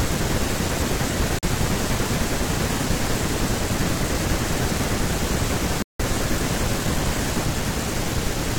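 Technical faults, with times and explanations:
1.39–1.47 s and 5.82–6.02 s, digital broadcast dropout: the receiver muted after losing frames, leaving silent holes of about 43 ms and 170 ms. These appear as flat waveform gaps and blank vertical bands across all frequencies on a spectrogram.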